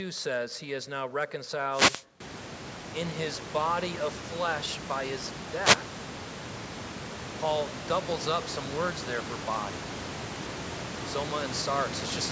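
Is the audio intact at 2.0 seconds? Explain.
No. From 1.69 to 2.05 s a short swish of static breaks over the speech. This is a wireless microphone noise hit: the FM radio link faded as reflected signals cancelled, so receiver noise rose for that moment.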